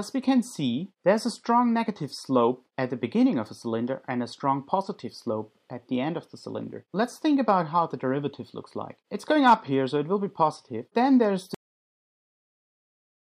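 The final buffers of this audio were never written out or played, which produces a cut-off end at 11.54 s. Because the stream simply stops delivering data at that point, the sound is severed in the middle of whatever was happening rather than fading or decaying naturally. From 11.54 s to the end, roughly the last 1.8 s, there is only silence, with no tail or release to soften the break.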